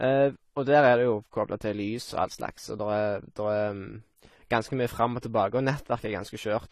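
Throughout the speech, transcoding between lossy codecs has likely occurred: the layered artefacts fit a Vorbis encode near 68 kbit/s re-encoded as AAC-LC near 32 kbit/s. Both codecs' artefacts are heard at once, and nothing remains above 14.1 kHz.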